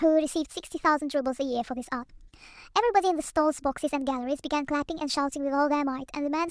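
Throughout, a wrong sample rate makes the speech run 1.38 times too fast and 5.6 semitones too high, which fits 16 kHz audio played back at 22 kHz.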